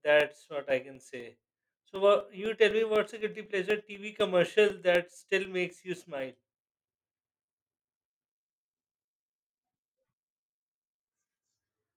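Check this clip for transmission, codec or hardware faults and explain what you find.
There is a hardware-side fault: periodic USB or driver dropouts from 0.20 s to 6.2 s. Something is stalling the USB bus or audio driver on a fixed schedule, every 0.25 s, and each stall loses a couple of milliseconds of speech, which is replaced with silence. The result is around thirty evenly spaced ticks, four per second, that click through the speech while sound is present and stop after 6.2 s.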